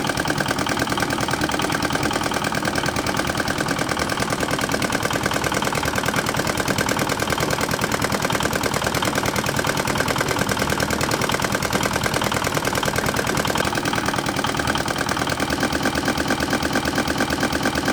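From 15.64 s to the end, a fragment of about 225 ms repeats ten times back to back, like a stuck record: a broken-record loop. Whatever stalled, likely the player or stream, kept resending its last piece, so the audio that belonged there is lost.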